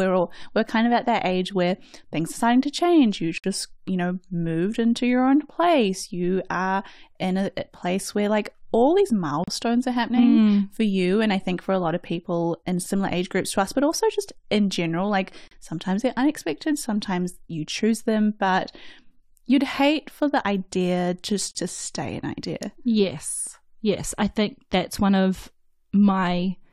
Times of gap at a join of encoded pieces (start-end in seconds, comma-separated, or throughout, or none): 3.38-3.44, 9.44-9.48, 15.48-15.51, 21.51-21.55